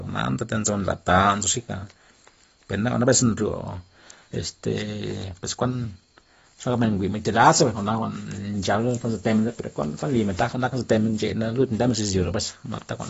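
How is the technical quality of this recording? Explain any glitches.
The recording has obvious compression damage throughout. From start to finish the speech sounds dull and smeared, with nothing above about 7.6 kHz and a warbly, fizzy edge on sibilants. That's most likely AAC compression, AAC-LC at a low rate, which fits something around 24 kbps. At that rate the encoder drops the top band entirely and spends its few bits coarsely on what's left, so gaps open in the spectrum and the texture swims from frame to frame.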